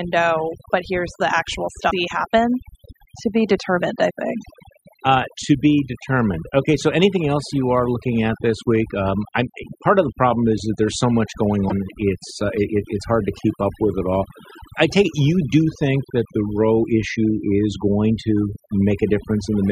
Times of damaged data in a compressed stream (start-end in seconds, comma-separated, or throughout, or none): 1.87-1.92, 11.67-11.72